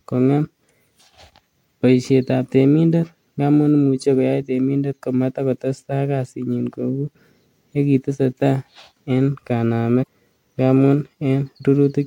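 Right near the end, from about 10.02 to 10.07 s, there's a short burst of damaged data in the compressed stream, roughly 50 ms of it. A stretch of the encoded bytes got corrupted, so the decoder couldn't make sense of those frames, lost its footing and had to hunt for the next valid frame header before it could carry on. What you hear is a quick glitch right there.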